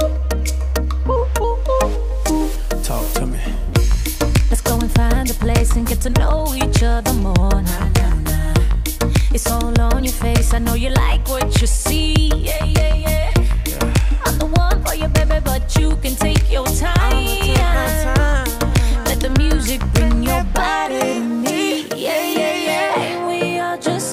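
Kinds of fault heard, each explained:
Clock drift buffer slips: a click recurs every 1.25 s from 0.12 s to 23.94 s, about twenty in all. Likely two devices on separate clocks disagreeing by roughly 150 ppm, so a buffer between them periodically drops or repeats a handful of samples.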